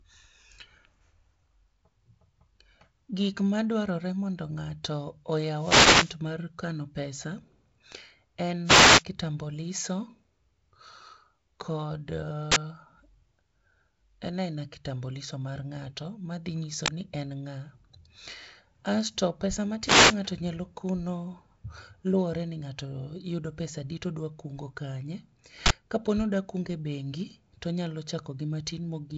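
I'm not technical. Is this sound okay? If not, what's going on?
No. Three times, at 5.56 to 6.16 s, 8.64 to 9.04 s and 19.83 to 20.17 s, a short swish of static rises and partly covers the speech. These are wireless microphone noise hits: the radio signal from the microphone briefly faded, so the receiver's own hiss broke through.

There are also three sudden, loud bursts of harsh digital noise: 12.52 to 12.56 s, 16.86 to 16.88 s, and 25.66 to 25.70 s, right after "pesadi todwa kungo kanye". Each is an uninitialised buffer: the system played a chunk of memory before any sound had been written into it, so leftover data came out as noise. The longer bursts fit a 2048-sample chunk and the shorter one a 1024-sample chunk.

The telephone-style wideband coding is also audible as a light hiss and a limit on how bright the speech can sound.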